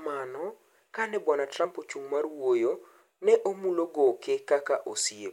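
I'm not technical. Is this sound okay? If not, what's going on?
No. At 1.64 s there is a tiny gap in the speech, a fault called compressed frames skipped. Compressed audio is stored in short blocks called frames. Here one block never plays, likely because it was missing from the file or was too damaged to decode. The sound jumps ahead by roughly 30 milliseconds, which fits a single frame of about 26 ms.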